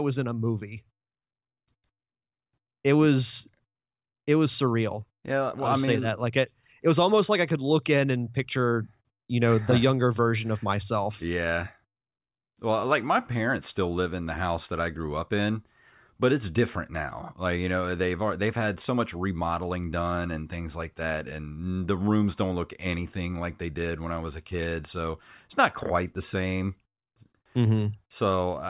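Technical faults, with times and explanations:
No technical faults found.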